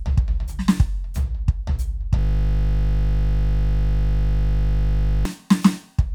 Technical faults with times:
2.19-5.25 system hang loop

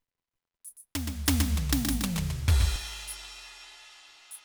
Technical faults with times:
0.76-2.76 doubled audio track

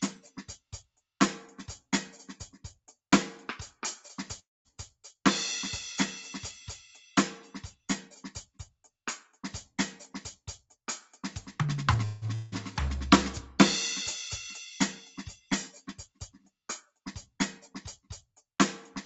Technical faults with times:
0.57-1.02 sound cut by the noise suppressor
4.39-4.68 call audio freeze
8.46-8.90 sound cut by the noise suppressor
10.45-11.95 jitter buffer speed-up
12.05-12.27 call audio freeze
12.35-12.55 long network dropout
15.76-16.53 sound cut by the noise suppressor

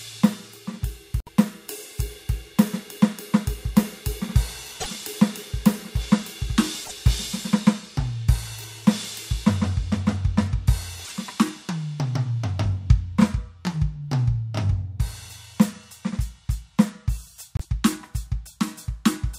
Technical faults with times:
1.19-1.29 broken MP3 bit reservoir
4.79-4.88 broken MP3 bit reservoir
6.83-6.92 broken MP3 bit reservoir
11.04-11.12 broken MP3 bit reservoir
17.57-17.65 broken MP3 bit reservoir

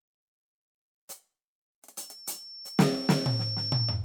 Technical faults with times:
1.99-4.04 loudspeaker feedback squeal

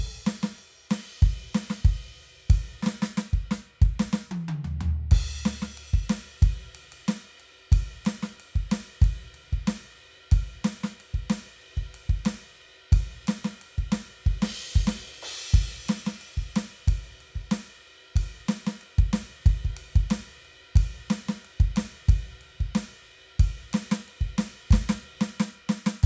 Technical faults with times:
none

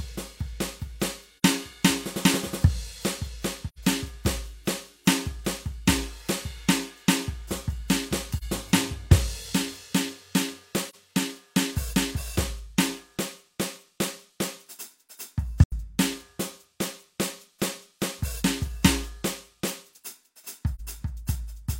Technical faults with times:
1.38-1.43 AAC frame loss with muting
3.68-3.79 AAC frame loss with muting
8.37-8.44 AAC frame loss with muting
10.89-10.95 AAC frame loss with muting
15.63-15.73 AAC frame loss with muting
20.75-20.81 AAC frame loss with muting

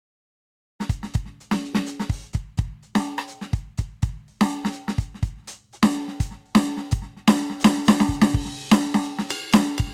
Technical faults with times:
none

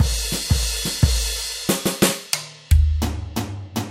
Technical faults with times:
none

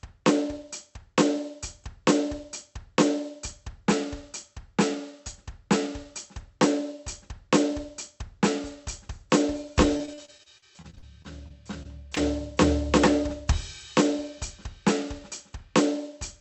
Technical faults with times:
9.97-12.18 repeated packet loss (robotic sound)

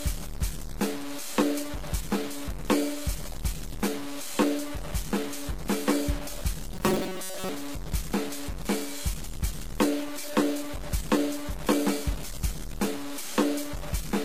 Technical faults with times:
0.00-14.25 low bit depth without dither
0.00-14.25 transcoding between lossy codecs
6.74-7.49 robotic sound from repeated short buffers

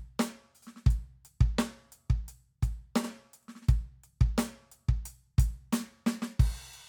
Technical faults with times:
3.03-3.08 repeated frames

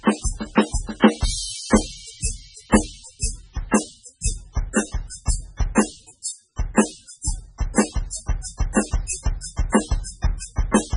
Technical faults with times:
0.00-10.97 MP3 compression

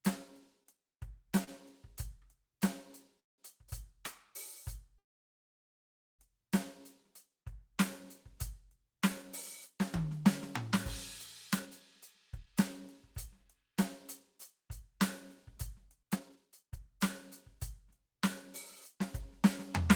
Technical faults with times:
0.63-1.49 repeated stalls (stutter)
3.20-3.40 call audio freeze
4.98-6.21 call audio freeze
11.53-19.82 jitter buffer speed-up

